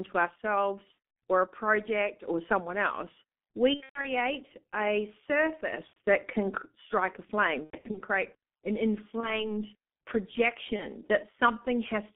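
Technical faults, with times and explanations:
Throughout: G.723.1 codec. At about 6.3 kbit/s with a 200 Hz to 3.5 kHz line band, speech is heavily muffled and hoarse, and consonants are smeared. A spectrogram shows nothing above 3.5 kHz and coarse, slowly updated formant bands in 30 ms blocks.
0.92–0.95 s, 3.74–4.09 s, 5.87–5.97 s (just before "that can strike a"), 7.64–8.02 s (between "can strike a flame" and "create an"), 9.20–9.53 s (after "create an"), 10.76–10.86 s: VoIP packet loss concealed by the speech codec. The decoder repeats its last pitch and filter and fades them, so the speech turns into a buzzy tone or a coloured noise that fades. The longest gaps are 120 ms at 3.74 s and 90 ms at 7.64 s. Weak, distorted speech follows each gap. Spectrograms show smeared, repeated harmonics, and the waveform shows decaying periodic stretches.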